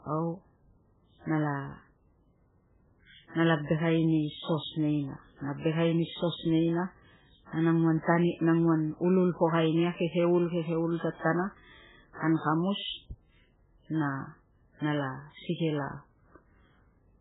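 Throughout the speech, nothing sounds above 3.8 kHz, and the sound is watery and swirly, with smeared attacks. The likely cause is heavy MP3 compression. Starved of bits, the encoder dropped the treble and zeroed weak frequency lines, which fits a very low bitrate around 8 kbps.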